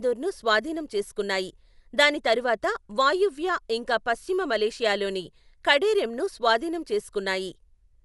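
From start to finish the speech sounds dull and muffled, with nothing above 11.5 kHz, and a rough, fluttering grain clings to the voiced sounds, plainly audible throughout. This is likely Dolby Digital compression at a low bitrate, which fits a rate around 64 kbps: the encoder has cut the band short and left many frequency lines without real detail, so the decoder fills those gaps with noise that flutters around the tones.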